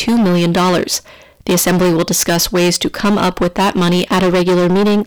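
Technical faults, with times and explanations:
Throughout, hard clipping: the signal is driven roughly 19 dB past what the stage can pass, so its peaks are sliced off flat, and nearly a third of the waveform was cut flat at that stage's limit. Those squared-off tops generate strong harmonics reaching high into the spectrum, which is why every loud moment turns into a harsh, buzzing fuzz rather than occasional crackle.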